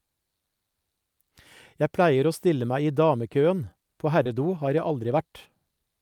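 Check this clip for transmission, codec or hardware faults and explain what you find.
One transmission fault is audible: short concealed packet loss from 4.23 to 4.27 s. About 20 ms of the speech never arrived in time, and the receiver patched roughly 19 ms of it by extending the preceding sound, pitch-based if voiced and shaped noise if not, before crossfading back. The result is a brief smear or wobble. Unlike a plain dropout, there is no hard silence or click, just a blurred instant where a consonant may thin out.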